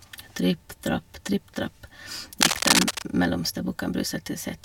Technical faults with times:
2.41-3.03 cable scratch noise

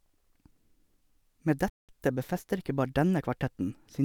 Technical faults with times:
1.70-1.89 playback stall

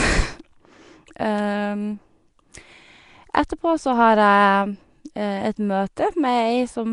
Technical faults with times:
0.00-6.93 Nellymoser compression

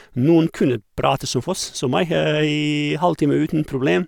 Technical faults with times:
none

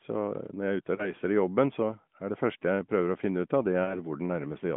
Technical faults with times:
0.96-1.12 lost AMR speech frames
3.84-4.04 lost AMR speech frames

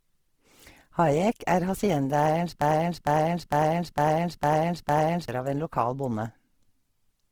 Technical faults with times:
0.00-7.32 Opus compression
2.61-5.28 broken-record loop

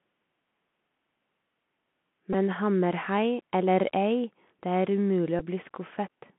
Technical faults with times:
0.00-6.38 Bluetooth CVSD headset codec
2.33 Bluetooth headset packet repeated
5.39-5.43 Bluetooth headset packet repeated

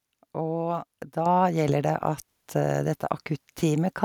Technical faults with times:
1.26 microphone volume stepped up

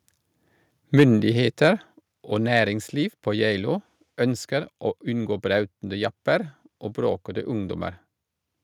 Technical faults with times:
0.98-1.04 microphone overload
1.00 microphone volume stepped down

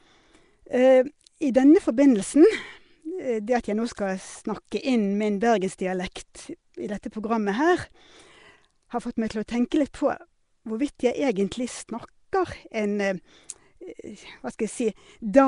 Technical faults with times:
0.00-15.47 Nellymoser compression

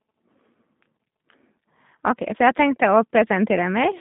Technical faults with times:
0.00-4.00 G.729 codec

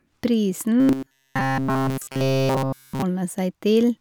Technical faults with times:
0.80-3.03 robotic sound from repeated short buffers

